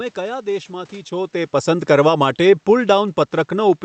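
From 1.69 s to the end of the clip, the speech shows automatic gain falling. The gain control judged the input too loud or its background noise too strong and began pulling its gain down gradually, so the voice and the room noise beneath it sink together rather than the voice alone. On a waveform, the envelope tapers steadily from 1.69 s onward. On a spectrogram, the whole picture dims evenly, including the background floor in the pauses. The 8 kHz ceiling of the Opus call path leaves the area above it empty throughout. The level change near one second comes from the talker moving relative to the microphone, not from the gain control.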